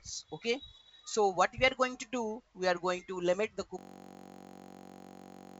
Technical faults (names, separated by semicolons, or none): system hang loop